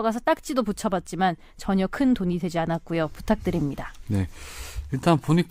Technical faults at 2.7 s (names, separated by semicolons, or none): none